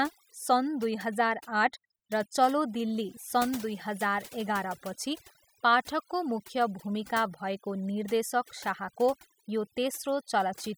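Speech throughout shows overdone noise removal: the background drops and breaks up into twinkling specks, unlike a noise gate's whole-signal on-off pumping.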